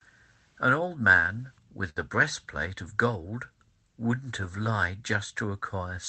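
At 1.89 s, a sound is held about 67 ms too long, from 1.89 to 1.98 s, with a slight buzz or dip before the speech picks up where it left off and nothing lost. This short stall from a late packet happened because a packet missed its slot, the jitter buffer ran dry, and the receiver stretched the last sound until the packet arrived. The delay grows by 67 ms from that point. Throughout, the WebRTC call path's coding noise and a top end cut off at 8 kHz fit an Opus stream at around 20 kbps.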